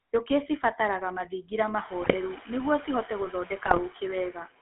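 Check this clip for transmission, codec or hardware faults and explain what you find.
Three faults are present: a speech codec running throughout, a noise suppressor acting throughout, and two short bursts of transmission errors.

GSM full-rate codec, whole clip: the speech sounds buzzy and gravelly, limited to roughly 250 Hz to 3.4 kHz. This fits a 13 kbps pulse-excited vocal-tract model with coarse excitation.

Noise suppressor artifacts, whole clip: the background pumps, dipping between words. A frame-by-frame suppressor is pulling steady noise down by about 17 dB, and the room noise rises by about 24 dB near 2 s.

GSM bit errors, 2.02–2.15 s and 3.66–3.79 s: gargling squawks and pops appear after "cibataraga mathingira" and again after "nĩguo cihote". Corrupted filter, pitch and gain values are reaching the decoder over roughly six frames each time.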